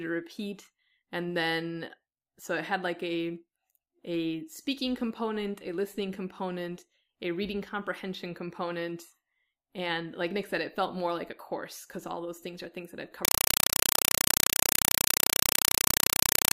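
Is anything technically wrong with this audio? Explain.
Yes. From 13.25 s to the end at 16.55 s, a compressed stream is played as audio. Undecoded data, likely AC-3, is treated as samples, so 4 ms noise bursts separated by silence repeat at 31.25 Hz. The speech is replaced by very loud, chattering static.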